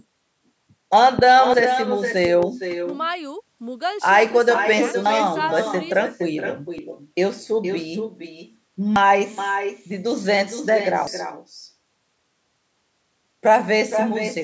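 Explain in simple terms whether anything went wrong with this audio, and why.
Several things went wrong. First, echo with no canceller: the other person's loudspeaker fed the call back into their microphone and nothing removed it. So the speech comes back about half a second later as a quieter, thinner copy, shadowing everything said throughout the clip.

Second, there are loud pops, likely from a sudden electrical jolt such as a plug, switch or static discharge. A strong, sharp pop lands at 1.19 s, and a weaker pair of pops follows between 2.25 and 2.45 s, while the speech carries on underneath.

Third, there are dropped buffers (overrun), likely because the recording program fell behind and the hardware overwrote audio it hadn't collected yet. At 5.06, 6.78 and 8.96 s, a short chunk well under a tenth of a second vanishes, and at 11.07 s about a fifth of a second is lost. Each time the speech jumps ahead, with no gap of silence.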